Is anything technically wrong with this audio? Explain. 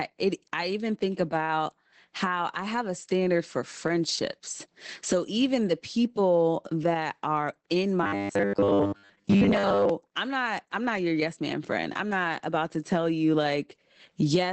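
Yes. Throughout, Opus voice compression in SILK mode cuts everything above 8.6 kHz and codes the excitation coarsely, which fits about 12 kbps. The result is muffled, slightly hoarse speech.

From 8.03 to 9.89 s, after "people that are in" and before "I'm not I'm not", there is robotic sound from repeated short buffers. A rigid, metallic 100 Hz buzz replaces most of the speech. The likely cause is a 10 ms buffer being replayed while new audio is skipped.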